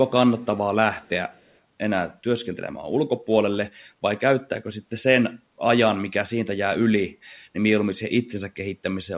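A speech recording with three short bursts of echo leak, at 0.38 to 0.46 s, 0.98 to 1.09 s and 1.32 to 1.58 s. Each is a faint repeat of the voice trailing it by 199 ms, sitting far below the direct speech, roughly 35 to 40 dB down. The likely cause is a far end on loudspeaker whose echo canceller let residual pickup back into the call. The whole clip is band-limited to 4 kHz, consistent with a G.711 call path.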